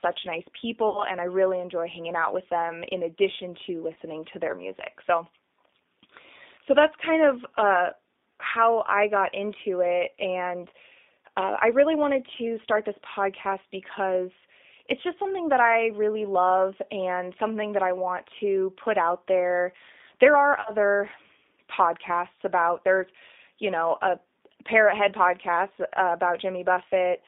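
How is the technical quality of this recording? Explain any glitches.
The recording has plainly audible codec damage throughout and three short dropouts.

The speech passed through a G.729 (G.729A) codec at 8 kbit/s, over a line band of roughly 250 Hz to 3.7 kHz. Because the codec rebuilds the voice from a filter, a pitch predictor and a few pulses per frame, rather than from the waveform itself, the speech comes out thin, band-limited and noticeably rough and synthetic.

VoIP packet loss concealed by the speech codec occurs three times. From 0.89 to 1.03 s, just before "and I really enjoy", about 60 ms of audio went missing, which fits three lost 20 ms packets. Near 3.94 to 3.97 s, between "them in addition to" and "to their music", about 20 ms was lost, which fits one packet. From 20.61 to 20.72 s, about 40 ms was lost. In each gap the decoder extended its last pitch and filter at falling gain, so the sound smears into a fading buzzy tone or coloured noise. 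Because each frame builds on the previous one, the voice stays weak or distorted briefly after packets resume.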